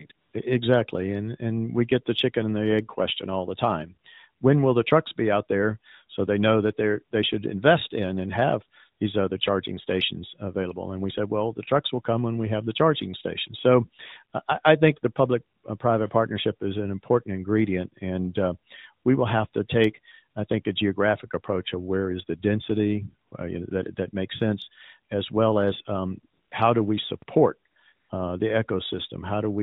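At the very start, AMR comfort noise takes over twice in quick succession: a brief patch at 0.08 s lasting 20 ms, then a longer stretch from 0.12 to 0.34 s lasting 220 ms. In both, the phone's voice activity detector treated the input as silence and stopped sending speech frames. The receiving end substituted synthetic noise built from a rough level and spectral shape. The real background drops out and is replaced by a smooth, even hiss that switches in and out abruptly.

At 27.22 s, just after "um how do we", there is a DC step. The waveform's zero reference jumps to a new offset, heard as a single low thump under the speech. The offset then drains away, as a 20 Hz high-pass in the chain pulls the signal back toward zero, so there is no lasting shift.

From 27.94 to 28.10 s, AMR comfort noise returns for 160 ms, ending just before "uh the". The transmitter again judged the talker silent and stopped sending frames, and the same flat synthetic noise fills the gap before real speech resumes.

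Throughout, the audio carries the 4 kHz band limit of narrowband AMR, with light coding texture that points to its 12.2 kbps mode.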